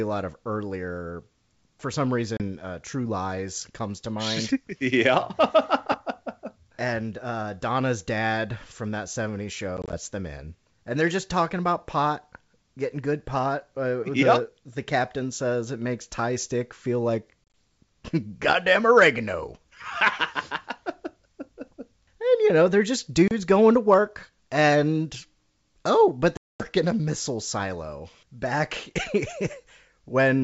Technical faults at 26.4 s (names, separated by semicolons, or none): packet loss on an ADPCM call